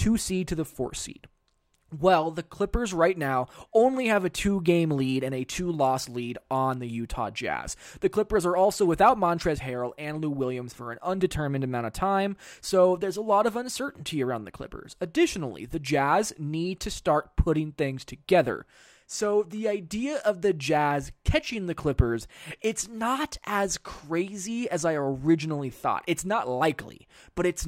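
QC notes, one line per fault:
19.92 s, dropped buffer (overrun): the speech jumps ahead, likely a few milliseconds of samples overwritten before capture, leaving the two sides spliced directly.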